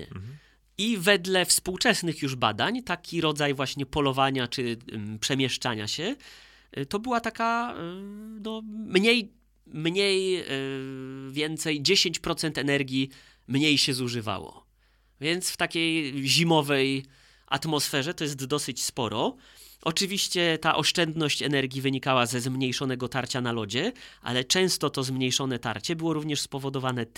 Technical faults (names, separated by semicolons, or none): none